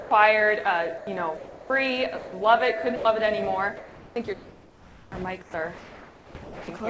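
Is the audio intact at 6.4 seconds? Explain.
No. From 5.42 to 6.68 s the real background is replaced by comfort noise, a steady, featureless hiss that the receiver likely synthesises while discontinuous transmission has the sender paused. Unlike a dropout, the gap is filled, but the filler lacks the original background's texture and detail.

At 6.44 s, just after the asked moment, the sound itself is likely dropped by the voice detector. About 170 ms of actual sound is lost under that same steady noise until 6.68 s. Here wanted sound, not merely background, disappears, and it returns only when detection resumes.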